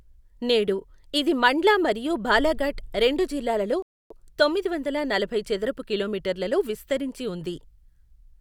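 At 3.82 s the player ran short of downloaded audio and had to halt playback until more data arrived, a rebuffering stall. The speech cuts cleanly to silence right after "మరియు బాలాఘాట్ రెండు జిల్లాలలో" and picks up again at 4.11 s with "తొమ్మిది వందల నలభై చదరపు", resuming at exactly the point where it stopped. No speech is lost; the gap simply inserts about 280 ms of dead air into the flow.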